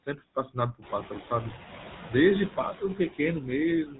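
Throughout the clip, the speech carries the buzzy, gravelly roughness of the GSM full-rate codec. The vocal-tract model is driven by a coarse, regularly spaced pulse excitation, and it is plainly audible here, consistent with the 13 kbps full-rate coder.

Also throughout, there are noise suppressor artifacts. The background is pulled down by about 8 dB, band by band and frame by frame, so the residual noise sinks in pauses and swells under speech. This is most noticeable once the room noise rises by about 15 dB near 1 s.

From 0.06 to 0.57 s, the noise suppressor cuts speech. It misreads parts of the opening as noise and dips them by up to about 14 dB, across roughly 150 ms in total, so those sounds come out swallowed and faint.

At 1.50 to 1.53 s, GSM bit errors hit the decoder. Corrupted filter, pitch or gain parameters distort a couple of frames, which fits two damaged 20 ms frames, and the result is a brief squawk and gargle.

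From 3.86 s to the end, the noise suppressor cuts speech again. Up to about 12 dB is removed over roughly 150 ms, leaving the final sounds faint and clipped away.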